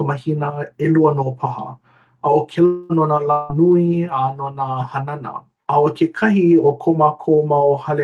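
Around 2.65 to 2.92 s, and again from 3.31 to 3.52 s, the speech gives way to a fading buzzy smear before picking up further on, with a chunk missing each time. That's likely a long network dropout, with the receiver concealing about 240 ms and then 180 ms of lost audio.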